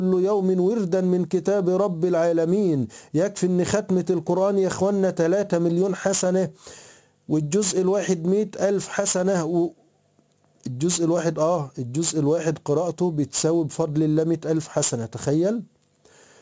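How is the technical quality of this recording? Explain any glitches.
The technical quality is compromised by aliasing throughout the clip. The audio was downsampled without an anti-alias filter. Sound that lay above 8 kHz folds back below it as unrelated, gritty tones roughly 20 dB under the main signal. The spectrum stops hard at 8 kHz, which fits a 16 kHz sample rate.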